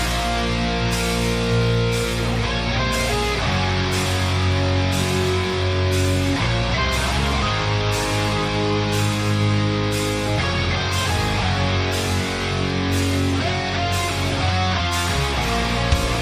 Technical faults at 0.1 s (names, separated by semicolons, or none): none